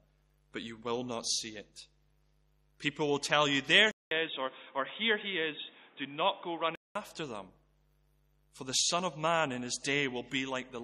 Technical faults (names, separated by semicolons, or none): input switched to a poorer device